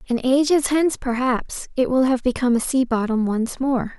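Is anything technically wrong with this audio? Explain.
No, nothing is technically wrong with this audio.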